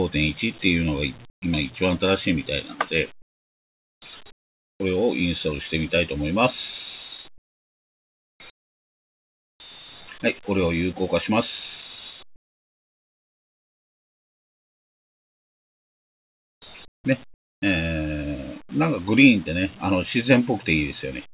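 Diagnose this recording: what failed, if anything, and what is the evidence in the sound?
Call processing: comfort noise in place of the background at 1.3–1.42, 3.22–4.02, 4.32–4.8, 7.38–8.4, 8.5–9.6, 12.36–16.62, 16.88–17.04 and 17.34–17.62 s. The real background becomes a steady, featureless hiss, mostly about 7 to 27 dB quieter, once about 8 dB louder. The likely cause is discontinuous transmission, with the receiver synthesising the fill.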